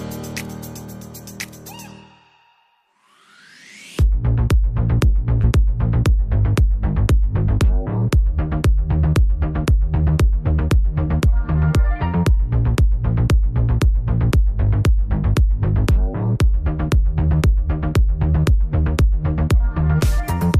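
From 5.41 to 5.46 s, short concealed packet loss: about 20 ms never arrived and was filled by extending the preceding sound, giving a brief smear rather than a silent dropout.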